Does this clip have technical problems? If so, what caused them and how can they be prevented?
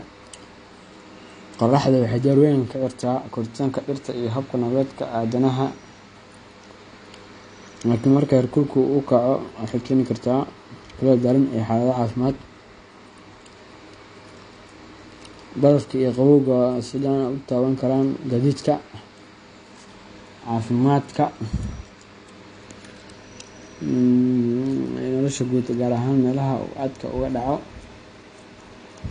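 Yes. AAC compression damage runs throughout the speech. Nothing is present above 9.8 kHz, so the sound is dull and band-limited, and the coding damage is plainly audible as smearing and a fizzy, unstable texture where the encoder ran short of bits. The likely cause is low-bitrate AAC-LC encoding: starved of data, it lowered its cut-off and quantised what remained coarsely, which fits a rate around 32 kbps. To prevent it, encode at a higher bitrate or keep an uncompressed copy.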